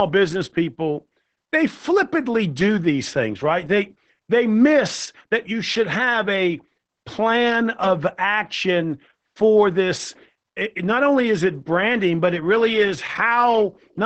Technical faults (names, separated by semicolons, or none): Opus voice compression